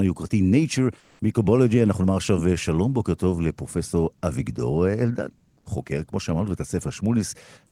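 From 0.99 to 1.21 s, the sender most likely stopped transmitting during a pause in the speech, as discontinuous transmission such as Opus DTX does, and the receiver filled the gap with synthetic noise. This is comfort noise in place of the background. For about 220 ms, the real room sound, sitting about 39 dB below the loudest speech, gives way to a smooth, featureless hiss at the same level, then the natural background returns when the speech resumes.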